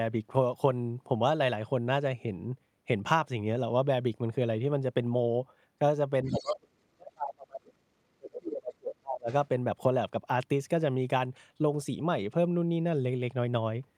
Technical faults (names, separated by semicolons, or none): speech suppressed in double talk; other side's voice leaking through